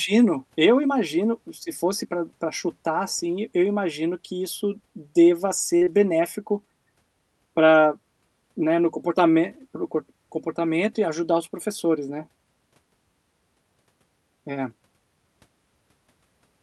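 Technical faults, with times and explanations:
5.25 to 6.05 s, lost packet rebuilt from error correction: a burst of separate 20 ms packet losses hits this stretch. The packet after each one carried a low-bitrate backup copy, so the decoder played that. There are no gaps, just brief patches that sound rougher and grainier.
5.77 to 5.83 s and 5.85 to 5.89 s, short concealed packet loss: about 40 ms and then 20 ms never arrived in time. The receiver carried the last sound forward to fill each hole and blended back, so you get a quick smear or wobble inside that rough patch.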